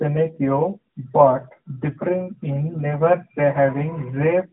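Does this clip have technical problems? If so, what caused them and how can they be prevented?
Yes. Throughout, the speech shows AMR narrowband mobile codec damage. Nothing above 3.9 kHz survives, and rebuilding the voice from a pulse-driven vocal-tract model leaves a plainly buzzy, synthetic texture, which fits the 10.2 kbps AMR-NB mode. A simple low-pass filter would dull the top end without adding that buzz. Routing the call over a wideband codec, or recording locally, prevents it.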